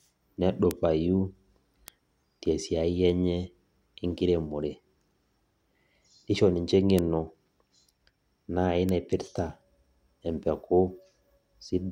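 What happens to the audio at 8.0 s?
Nothing goes wrong at 8.0 s; the speech plays through that moment intact, with no dropout, click or distortion.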